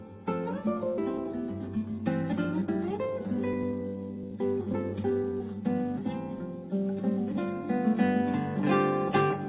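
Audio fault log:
0.98–1.00 s, skip ahead: playback jumps forward with no filler, so roughly a second of audio is simply gone and the two sides are butted together. The audio was dropped in transit or by an overflowing jitter buffer. The waveform shows an abrupt splice, and the spectrogram shows a hard vertical seam where the content changes instantly.
1.10–5.40 s, jitter buffer speed-up: the audio runs at about 113% speed with unchanged pitch and sounds hurried. Around half a second in total is trimmed as repeated cuts of a pitch period or so, to drain an overfull buffer. The spectrogram shows harmonics at normal spacing but events packed closer in time. The band above 4 kHz stays empty.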